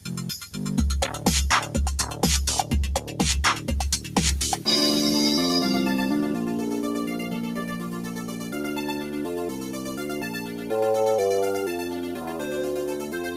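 From the start, a noise suppressor designed for speech is processing material it was never meant for. It treats sustained tones, ambience and decay tails as noise, so gain rises and falls by around 10 dB as the sound changes. Onsets pass, but held portions sink and flutter. On a waveform the envelope pumps, and a spectrogram shows tails cut off abruptly with low-level fill flickering in and out.

Sound cut by the noise suppressor appears at 7.77 to 8.54 s, 9.50 to 9.99 s and 10.33 to 10.70 s. Each time the suppressor misreads steady content as noise and pulls it down by about 5 dB, for roughly 0.7, 0.5 and 0.4 s. The sound audibly dips and thins. On the waveform these show as shallow troughs, and on a spectrogram as faded bands where sustained energy briefly weakens.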